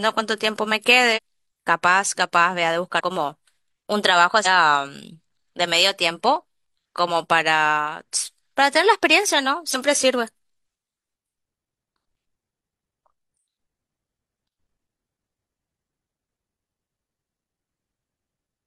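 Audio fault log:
1.13 to 12.31 s, compressed frames skipped: at 1.13 to 1.19, 2.97 to 3.01, 4.42 to 4.47, 9.71 to 9.76 and 12.31 s, the decoder never plays some compressed frames, so the speech jumps ahead. It loses about a tenth of a second at the first two points, nearly a third of a second at 4.42 s, and a single frame's worth at the last two. Those losses are multiples of a 42.7 ms frame.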